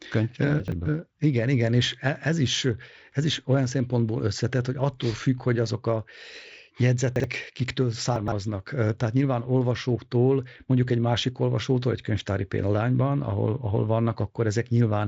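Around 0.6 to 0.72 s the speech briefly jumbles: a 40 ms chunk plays two chunks after where it belongs, so the chunks come out of order with three hard joins. The same thing happens at 7.16 to 7.24 s, one chunk late, and at 8.16 to 8.32 s, three chunks late and the most scrambled. Nothing is missing, just shuffled. Under it, the Speex coding sounds clean, with the top end stopping near 7.6 kHz.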